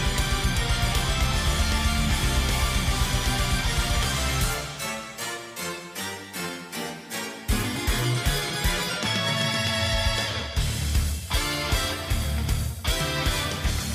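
Nothing stood out as a technical problem on listening.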